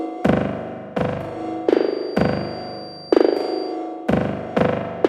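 A clip of everyday sounds with a feedback whistle from 1.65 to 3.79 s: a thin, steady 4.7 kHz tone roughly 20 dB down, likely a speaker-to-mic loop hovering at the edge of feedback.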